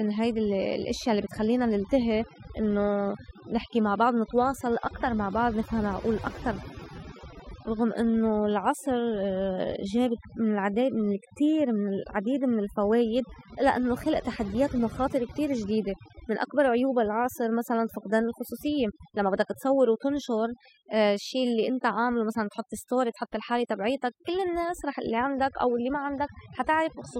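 From start to finish the speech shows overdone noise removal. A noise reduction stage was driven too hard, so any frequency band sitting near its noise estimate is pulled far down or switched off entirely, and the softer components of the voice are removed along with the noise. The background collapses to near silence scattered with twinkling specks of residue.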